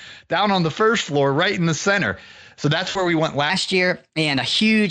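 A speech recording carried over Speex, with little or no audible coding damage from the codec itself, shows two faults. The first is VoIP packet loss concealed by the speech codec, between 2.89 s and 3.07 s. About 60 ms of audio went missing, which fits three 20 ms frames. The decoder filled the gap by repeating its last pitch and spectral shape at falling gain, so the speech smears into a brief buzzy, fading tone and stays thin for a moment after real audio resumes. On a spectrogram, the harmonics run flat and unchanging across the gap and dim steadily before normal detail returns. The waveform there is a repetitive, shrinking pattern. The second fault is a section at the wrong speed, from 3.50 s to the end. Playback runs 1.16 times too fast, so the speech sounds hurried and roughly three semitones higher, likely because that stretch was clocked or resampled at the wrong rate. On a spectrogram, the harmonics and formant bands sit higher, with wider spacing between harmonics. 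In the waveform, syllables are compressed in time compared with the earlier audio.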